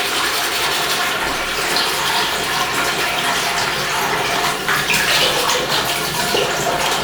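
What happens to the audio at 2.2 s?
Nothing goes wrong at 2.2 s; the sound plays through that moment intact, with no dropout, click, glitch or other fault.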